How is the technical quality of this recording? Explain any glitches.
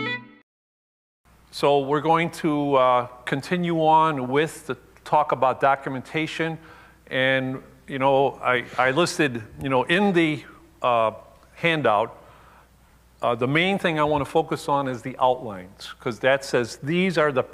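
No glitches are audible.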